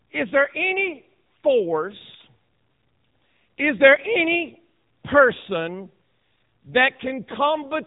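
Throughout, the speech passes through an AMR narrowband mobile codec at a low bitrate, consistent with the 7.95 kbps mode. The sound is rebuilt from a coarse vocal-tract model, so nothing survives above 3.8 kHz, and the voice comes out plainly buzzy, muffled and synthetic.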